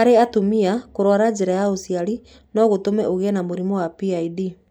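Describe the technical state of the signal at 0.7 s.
At 0.7 s the speech signal is intact, with no audible dropout, distortion or other fault at that point.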